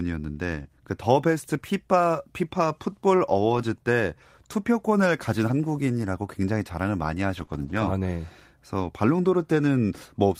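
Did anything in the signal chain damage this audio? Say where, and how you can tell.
Yes, the damage is in the network stage: packets were dropped, and the lost packet was rebuilt from error correction. At 0.51–0.61, 3.53–3.63, 6.01–6.03, 7.37–7.43, 7.49–7.87 and 8.79–8.85 s the speech turns rougher and noisier without any gap, as the decoder plays the low-bitrate copies carried in the following packets.

Short concealed packet loss also occurs at 0.63–0.67 and 7.45–7.49 s. About 20 ms of audio arrived too late each time, so the decoder extended the preceding speech and blended back into the real signal, leaving a brief smear or wobble.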